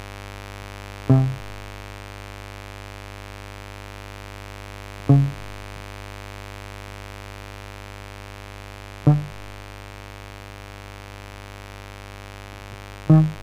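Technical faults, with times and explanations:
Throughout, mains buzz: a steady, raspy buzz sits under the music at about 20 dB below it, built from harmonics of the 50 Hz supply. Sharp switching spikes, twice per mains cycle, leak into the signal path and spread that energy up into the kilohertz range.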